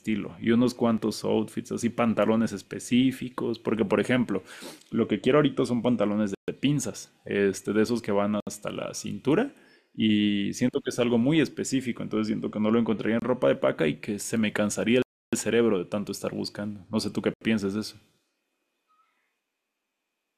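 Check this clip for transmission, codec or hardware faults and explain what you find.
Two kinds of fault are present in the speech: brief skips from dropped buffers and several dropouts from Bluetooth stalls.

The dropped buffer (overrun) faults, at 0.98 s and 10.73 s, are likely cases of the capture software failing to read its samples before the hardware wrote over them. A few milliseconds of audio, on the order of 5 ms, never reach the recording, and the audio on either side is spliced directly together. There is no gap. Each one is a short jump where the speech skips slightly ahead.

The Bluetooth stalls are likely caused by radio interference holding back packets until the headphones' buffer emptied. Playback then stops until the resent data arrives. The speech cuts to silence and resumes from about where it left off. The gaps fall at 6.35–6.48 s (133 ms), 8.40–8.47 s (67 ms), 13.19–13.22 s (27 ms), 15.02–15.33 s (303 ms, the longest) and 17.34–17.41 s (75 ms).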